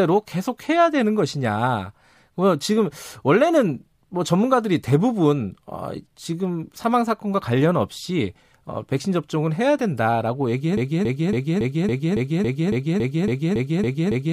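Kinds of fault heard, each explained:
Broken-record loop: the playback or streaming chain likely stalled and kept resending the last fragment it held instead of fresh audio. From 10.77 s the speech gives way to one 0.28 s slice repeated exactly, back to back, about 13 times, so the same sliver of sound stutters mechanically until the clip ends. Whatever speech belonged in those final seconds never arrives; the repetition simply replaces it through to the last sample.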